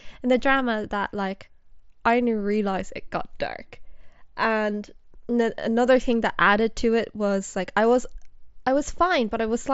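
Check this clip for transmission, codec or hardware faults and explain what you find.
No transmission, codec or hardware faults turn up in this speech recording. It has the character of a Bluetooth mSBC headset link working as designed, with the speech band reaching to about 8 kHz and a light graininess on the louder syllables.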